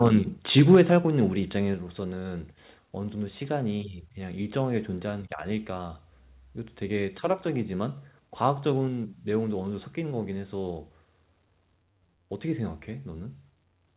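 At 0.05 to 0.08 s and again from 0.57 to 0.8 s the loudest speech crackles harshly. This is microphone overload, likely from input gain set too high, exceeding full scale by about 1 dB and then about 3 dB. On the waveform the peaks are sliced flat, briefly at first and more widely in the second burst.

Sudden level drops follow at 0.75 s and 1.74 s, each about 4 dB, and at 8.88 s, about 2 dB. This is the microphone volume stepped down, likely by the call software reacting to a loud or clipping input. The waveform envelope shrinks abruptly at each point, and the spectrogram dims across all bands at once. The band stops at 4 kHz, which fits a G.711 A-law call path.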